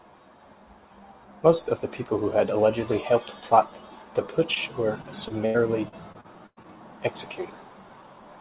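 At 4.54 to 4.58 s, just after "allegedly helped plot the", a short concealed packet loss occurs: roughly 20 ms of audio arrived too late, and the receiver extended the preceding sound, leaving a brief smear. From 5.02 to 6.66 s, repeated packet loss (robotic sound) sets in: eight separate losses, the longest 104 ms, were patched by concealment covering about a fifth of the stretch, so the speech turns choppy with pieces missing. Throughout, the narrowband call path keeps everything below 4 kHz, which fits a G.711 link at 64 kbps.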